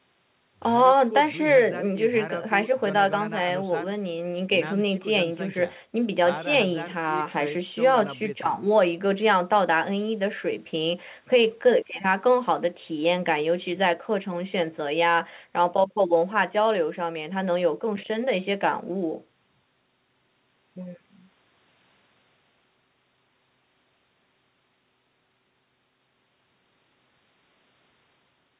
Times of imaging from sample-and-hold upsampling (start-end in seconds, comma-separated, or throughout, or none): none